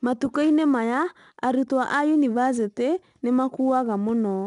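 Throughout the speech, 4-bit ADPCM compression codes each sample as a coarse step from a prediction. Its error rides on the signal as a plainly audible gritty hiss on louder syllables, and nothing reaches above 10.6 kHz, which fits a stream near 89 kbps.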